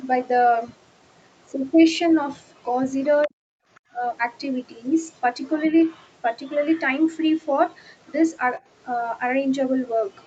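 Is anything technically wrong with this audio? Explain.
Yes, there are three kinds of echo-canceller fault in this speech.

Other side's voice leaking through: faint scraps of a second voice appear at 3.22 to 3.28 s, 3.75 to 3.80 s, 5.43 to 6.10 s, 6.44 to 6.81 s and 10.22 s to the end. They sit roughly 25 to 40 dB under the main speech, and likely come from loudspeaker echo the canceller failed to remove.

Speech suppressed in double talk: from 3.26 to 3.36 s the talker's voice drops sharply, by roughly 40 dB. This is likely because both sides spoke at once and the canceller turned everything down.

Background gated by the echo canceller: between 3.64 and 3.93 s the room sound dips by about 29 dB. The canceller clamped the microphone while the loudspeaker played, then released it.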